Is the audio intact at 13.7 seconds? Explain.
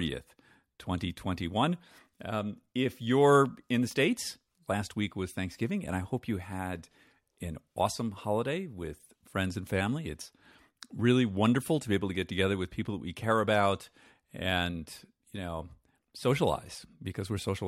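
Yes, at 13.7 seconds the speech plays through intact, with no dropout, click, distortion or other fault.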